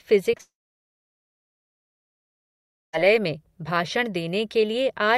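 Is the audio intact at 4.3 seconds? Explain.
Yes, the speech at 4.3 seconds plays through intact, with no technical fault at that moment.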